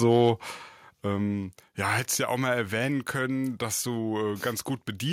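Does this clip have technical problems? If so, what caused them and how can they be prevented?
Yes. From 0.1 to 0.29 s the loudest moments of the speech take on a harsh, crackly edge, with the peaks sounding flattened rather than rounded. This is microphone overload, likely from an input level set high enough that the peaks ran about 1 dB past the converter's ceiling, so their tops were sheared off on a small fraction of the samples. Keeping the microphone's input gain lower, with headroom below full scale on the loudest syllables, prevents it.

At 1.02 s the speech and the background behind it drop together in one abrupt step, by about 6 dB, shortly after that distorted stretch. This is the microphone volume being stepped down, likely by the call software reacting to the earlier overload and cutting the device's input level in a single move rather than easing it down. Setting the input level correctly beforehand and turning off automatic microphone adjustment in the call software prevents it.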